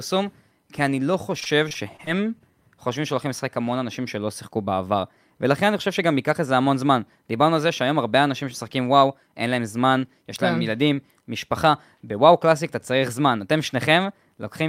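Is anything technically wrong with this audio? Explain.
Yes. From 1.40 to 2.52 s there is repeated packet loss (robotic sound): about seven short gaps, the longest around 21 ms, each filled by extending the previous sound. The speech turns choppy, with pieces missing. A spectrogram shows repeated, smeared harmonic slices, and the waveform shows copied cycles.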